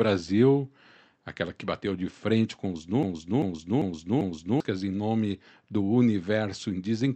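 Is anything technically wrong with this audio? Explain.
Yes. A broken-record loop runs from 3.03 to 4.60 s, just after "de frente com os". A 0.39 s fragment repeats four times back to back, likely because the stream stalled and kept resending its last buffer. The audio meant for that stretch is lost before "em nome do".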